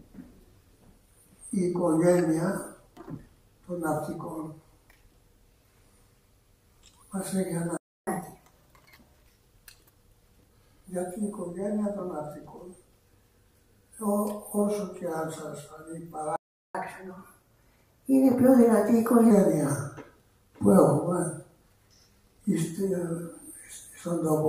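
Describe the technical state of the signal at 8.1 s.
The player was likely starved of data or blocked, producing a playback stall from 7.77 to 8.07 s: the sound cuts out abruptly for about 0.30 s. At 8.07 s, catch-up at higher speed begins, as the player resamples its backlog at 1.25 times normal rate until 9.27 s, so the sound runs audibly fast and about four semitones sharp before dropping back to normal.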